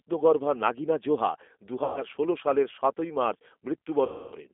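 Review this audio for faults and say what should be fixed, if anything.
The whole thing has been through the G.729 codec, and you can hear it plainly. The speech is squeezed into a phone band of roughly 250 Hz to 3.5 kHz, so it's thin and boxy, and there's that slightly rough, synthetic edge you get when the voice is rebuilt from a filter, a pitch predictor and a few pulses per frame rather than carried as a waveform. That fits an 8 kbit/s G.729A stream. Best fix: use a wideband codec like G.722 or Opus if the path allows it.

At 0.26 s there's a short burst of hard clipping, a tiny crackle where a peak ran about 2 dB past what the stage could pass and got cut flat. Those flattened tops add harsh upper harmonics. It's brief. Leave a few dB of headroom on the input gain or ahead of the converter so peaks never hit full scale.

There is also damage from VoIP packet loss concealed by the speech codec. 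From 1.84 to 2.03 s about 120 ms of audio is missing, which fits roughly six 20 ms packets. From 4.06 to 4.36 s about 260 ms is gone, which fits around thirteen. In both gaps the decoder keeps extrapolating its last pitch and filter, so the sound smears into a buzzy tone or coloured noise that fades, and the voice stays weak for a moment after the packets return. Fix the network path, or add jitter buffering and FEC.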